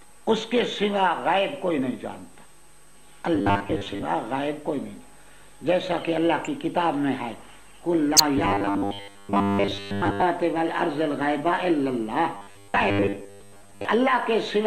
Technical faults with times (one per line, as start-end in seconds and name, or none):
3.35-4.05 robotic sound from repeated short buffers
8.38-10.22 robotic sound from repeated short buffers
12.35-13.85 robotic sound from repeated short buffers